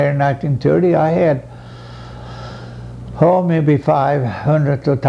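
No technical fault can be heard anywhere in the clip. Nothing in the sound calls for a timestamp or a closer look.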